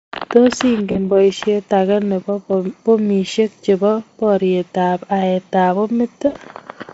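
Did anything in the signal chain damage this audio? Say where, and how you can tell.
Yes, at the network stage: packets went missing and the speech decoder had to conceal the gaps, a case of VoIP packet loss concealed by the speech codec. Near 0.91 to 1.10 s and again near 6.27 to 6.36 s, the voice smears into a thin, buzzy continuation that fades. The dropouts last about 40 ms and 80 ms, which fits two and four lost 20 ms frames. The decoder repeats its last pitch and spectral shape at falling gain, so the damage carries past the point where audio returns.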